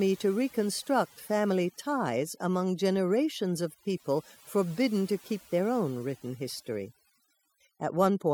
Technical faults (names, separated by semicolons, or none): overdone noise removal